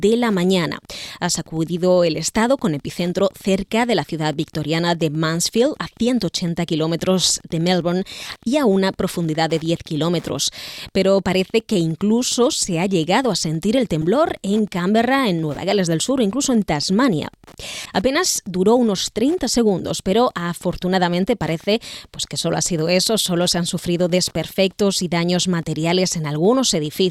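A steady tick about ten times a second runs through the whole audio, roughly 30 dB below the signal. This is Wi-Fi interference: a nearby radio's 102.4 ms beacon is being rectified by the audio circuit. Brief glitches at 14.02–14.04 s, 17.85–17.91 s and 26.18–26.20 s are each a corrupt frame decoded, where damaged bits in a frame or two of compressed data put energy at wrong frequencies. The first glitch is fairly loud and the last is faint.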